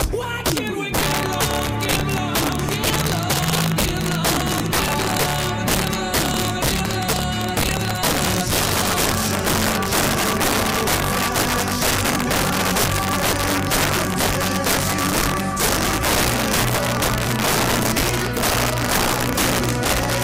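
Throughout the clip, a sum or gain stage is driven about 10 dB past its integer limit, and instead of saturating, the values wrap around to the opposite sign. Around seven percent of samples flip across the full range, producing violent, sharp cracks on every loud peak, far harsher than clipping.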